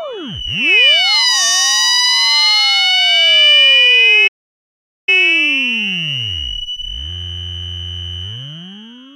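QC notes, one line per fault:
4.27–5.09 s, playback stall: the audio cuts to silence in mid-flow for about 0.80 s, then resumes. The likely cause is the player running short of buffered data or its output thread being blocked, leaving the device with nothing to play until it recovered.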